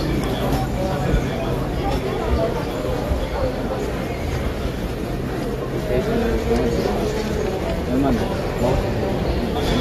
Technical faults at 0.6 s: AAC compression

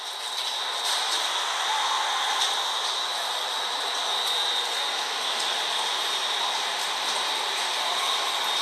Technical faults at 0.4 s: compressed frames skipped

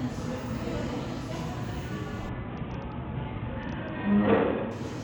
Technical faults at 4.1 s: Bluetooth SBC bit pool drop

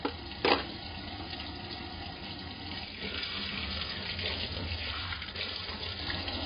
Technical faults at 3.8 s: AAC compression

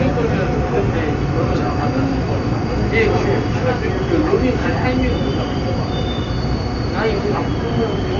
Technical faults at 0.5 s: Dolby Digital compression

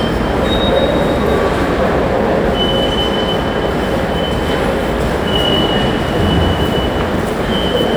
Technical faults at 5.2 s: block size mismatch (truncated)

